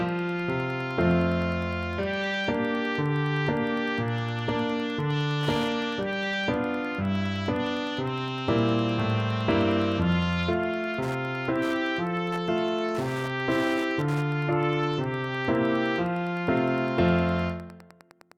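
A nearby Wi-Fi radio's beacon, every 102.4 ms, is rectified by the audio circuit throughout, producing Wi-Fi interference: steady ticking about ten times a second, roughly 25 dB below the signal.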